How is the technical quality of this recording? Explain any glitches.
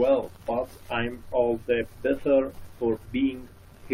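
No glitches or faults detected.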